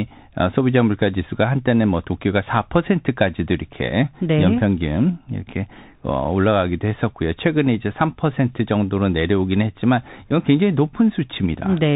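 The whole speech clip runs through a Bluetooth CVSD headset codec, and the damage is plainly audible. Everything above 4 kHz is gone, s sounds come out scratchy, loud bright bits distort as the one-bit step can't keep up, and a grainy hiss sits underneath, which fits a 64 kbps CVSD link.

At 6.24 s and again at 10.30 s there's unconcealed Bluetooth headset packet loss, each a hole of about 7.5 ms, which points to a single lost packet. Nothing fills the gap, so you hear a hard-edged little dropout.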